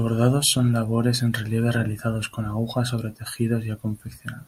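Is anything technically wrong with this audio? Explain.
No, nothing in this speech clip stood out as technically wrong on listening.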